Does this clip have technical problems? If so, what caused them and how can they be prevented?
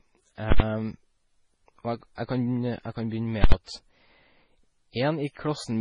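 Yes. Throughout the speech there are two layers of coding artefacts heard together, and nothing above 10.5 kHz. The likely cause is transcoding between lossy codecs: the sound points to a low-rate MP3 pass, around 24 kbit/s, later re-encoded as Vorbis, around 38 kbit/s. The second encoder spent its bits reproducing the first one's damage and added its own, while the lowest band limit in the chain carried through. On a spectrogram this shows as a hard ceiling at 10.5 kHz with blotchy, patchy high-frequency energy below it. To prevent it, encode once from the original lossless source, or keep intermediate copies lossless.

At 0.52 to 0.60 s and again at 3.44 to 3.52 s, a calculation produced invalid numbers at full scale. Each 80 ms block was forced to the largest positive or negative value, so a very loud pop sounds at each edge with silence between, where the flat level carries no signal. 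On the waveform each block appears as a solid flat rectangle far from zero, beyond the speech peaks, and on a spectrogram as bright vertical broadband lines at its two ends. To prevent it, check processing output for infinite or invalid values and replace or mute them before they reach the output stage.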